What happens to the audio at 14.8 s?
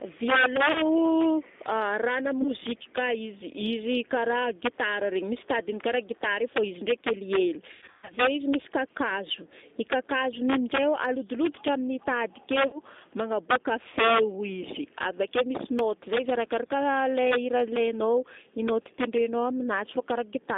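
At 14.8 s the loudest peaks break into sharp, violent cracks, harsher than ordinary clipping. This is integer overflow, present throughout the clip. The signal is driven about 4 dB past the integer limit, and the peaks that exceed it, roughly 0.7 percent of samples, wrap around to the opposite sign instead of being held at full scale.

The speech also sounds thin, slightly rough and synthetic there, with a narrow band of roughly 250 Hz to 3.7 kHz. This is G.729 codec damage, also present throughout. The encoder rebuilds speech from a vocal tract filter, pitch prediction and a few pulses per frame, which fits 8 kbit/s G.729A, and the loss is plainly audible.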